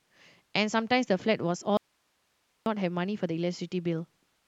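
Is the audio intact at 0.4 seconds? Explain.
Yes, the speech at 0.4 seconds is intact, with no dropout, click, distortion or other fault at that moment.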